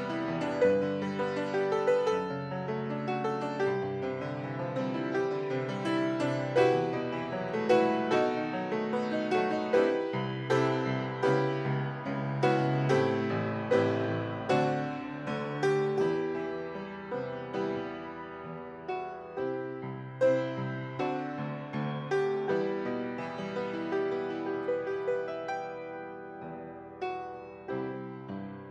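Nothing goes wrong anywhere in this audio, so there's no technical trouble to point out.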